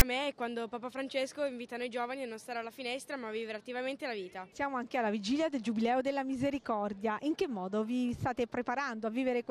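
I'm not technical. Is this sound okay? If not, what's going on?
No. Right at the very start, at 0.00 s, there is a tiny burst of harsh, raspy noise. It is a fault called file tags played as audio. Many sound files carry a small block of text describing them, such as a title or other details. Here the player read that text as if it were sound. Text turns into a loud, gritty rasp. It lasts only a split second.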